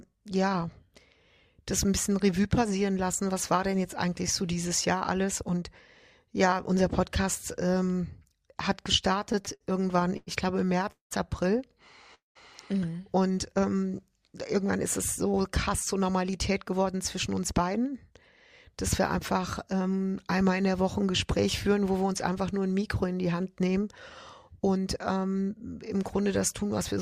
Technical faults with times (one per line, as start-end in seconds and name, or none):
9.19-10.29 repeated stalls (stutter)
10.92-11.12 call audio freeze
12.14-12.37 call audio freeze
14.55-18.12 jitter buffer speed-up
18.76-19.81 jitter buffer speed-up